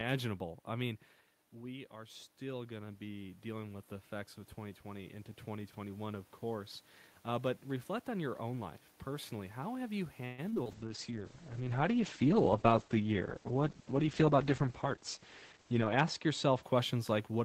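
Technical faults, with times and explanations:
1.53–6.79 s, automatic gain rising: the input fell about 9 dB, so gain crept up about 8 dB; the waveform envelope and noise floor swell together.
10.25–10.67 s, repeated packet loss (robotic sound): four gaps, the longest 128 ms, were patched by extending prior sound; the spectrogram shows smeared, repeated frames, sounding choppy.
10.71–16.69 s, call bitrate drop: the bitrate fell from 40 to 9 kbps, cutting bandwidth from 20 kHz to 8 kHz; the spectrogram goes empty above 8 kHz, so it sounds muffled and watery.
13.67–15.57 s, jitter buffer speed-up: an overfull buffer dropped pitch periods, roughly 150 ms in total, so playback runs 7% fast; waveform segments compress while the harmonics keep their pitch.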